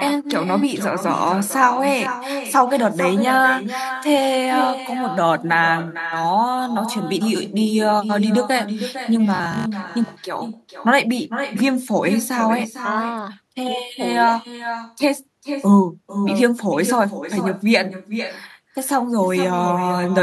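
All the way through there's an echo with no canceller: your own speech returns about half a second later, roughly 9 dB down and thinner. From 9.36 to 9.74 s the speech turns robotic, a stiff 50 Hz metallic buzz, likely from short buffers being repeated, with about half the real audio skipped.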